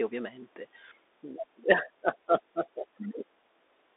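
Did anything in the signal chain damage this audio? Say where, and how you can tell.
Yes, at the codec stage, all the way through: this speech went through a Bluetooth CVSD headset codec. It stops at 3.8 kHz in a roughly 300 Hz to 3.7 kHz band. The one-bit-a-sample delta coding, which fits a 64 kbps link, can't keep up, so esses go scratchy over a grainy hiss.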